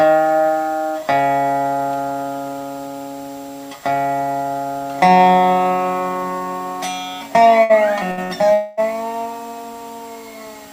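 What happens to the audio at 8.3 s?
At 8.3 s the audio is in a burst of packet loss (8.23 to 8.32 s), following another at 8.11 to 8.20 s. Each time, 60 ms of audio is lost and the gap is filled by repeating the last sound as it fades. On a spectrogram, the last frame stretches and dims, then jumps abruptly to later content.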